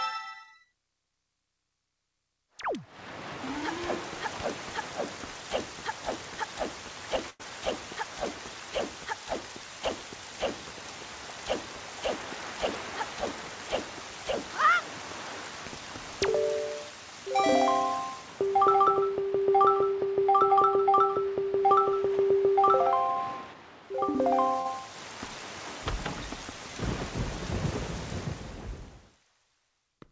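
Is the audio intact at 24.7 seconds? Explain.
No. From about 24.61 to 24.67 s there is a short concealed packet loss: 40 ms of audio never arrived, and the receiver covered the gap by extending the preceding sound, either repeating its pitch pattern or shaping noise, before blending back in. It is heard as a brief smear or wobble. On a spectrogram, the patched span sits below the call path's 8 kHz ceiling.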